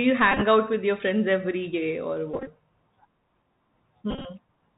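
From the start, the speech carries the sound of the Bluetooth CVSD headset codec, with plainly audible damage. The bandwidth stops at 4 kHz, and the one-bit delta coding, consistent with 64 kbps CVSD, leaves a grainy hiss under the voice. Where the signal rises quickly, the adaptive step size cannot keep up, so sibilants come out scratchy and loud, bright sounds distort.

Three stretches show a Bluetooth headset packet repeated. At 0.32 to 0.41 s, about 52 ms of audio is lost across roughly 98 ms, which suggests around 14 lost packets. At 2.34 to 2.48 s and again at 4.11 to 4.26 s, about 86 ms is lost across roughly 135 to 143 ms, which suggests around 23 packets each time. The decoder replays the previous packet's bits in place of each missing one, and the 3.75 ms repeat cycle produces a buzz near 267 Hz. Within each stretch, the longest unbroken run of this buzz lasts about 20 ms.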